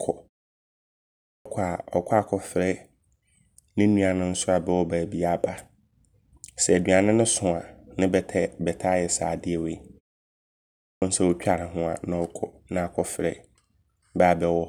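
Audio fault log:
1.35 s and 10.90 s: clipped start after a pause. After gaps of 1.14 s and 0.98 s, the first 105 ms and 119 ms of returning speech are missing, so each onset starts abruptly because the output device slept during the silence and woke late.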